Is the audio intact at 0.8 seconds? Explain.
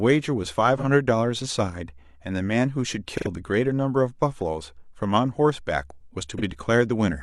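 No. From 0.77 to 0.84 s there is an AAC frame loss with concealment. About 43 ms of the signal went missing, which fits a single lost frame, and the decoder patched the hole by reusing the preceding spectrum with its phase information scrambled. The result is a brief smeared, noisy, phasey blur. A plain dropout would leave a click or a silent gap. Here the gap is filled with a spectral smear that never falls to silence.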